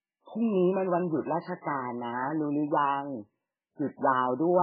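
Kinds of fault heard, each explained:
MP3 compression: the speech has nothing above about 4.7 kHz and a heavy watery, swirling texture, with s sounds turned into metallic chirps and onsets smeared. This is likely a very low bitrate MP3 encode, near 8 kbps, where the encoder discarded the treble and let weak frequency lines flicker between frames.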